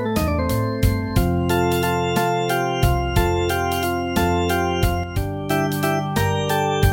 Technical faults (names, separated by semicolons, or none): sudden gain jump